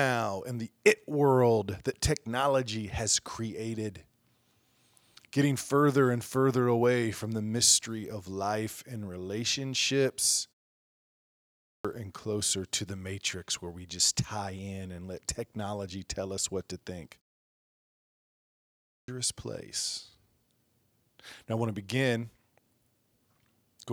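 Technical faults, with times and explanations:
11.19–11.85 s and 18.48–19.08 s, clipped start after a pause: after silences of 0.74 s and 1.35 s, the output device has dropped into a sleep state and needs time to wake and lock again. About 0.66 s and 0.6 s of sound are swallowed, so speech resumes abruptly, without its opening sounds, the first time just before "and closer to the".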